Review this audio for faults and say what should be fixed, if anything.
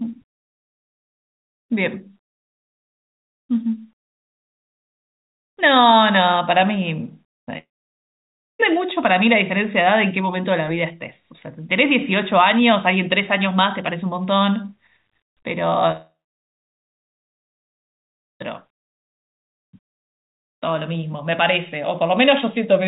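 Two long network dropouts break up the speech, at 7.58 to 8.61 s and at 15.91 to 18.42 s. The likely cause is lost packets. The first gap loses about 1.0 s, the second about 2.5 s. In each, the last sound is stretched into a short fading buzz. Then silence takes over, for about 0.95 s and 2.29 s respectively. The speech resumes later, and the missing part is never heard. The band stops at 4 kHz, which fits G.711 mu-law at 64 kbps. To prevent this, stabilise the network link and add packet redundancy or retransmission.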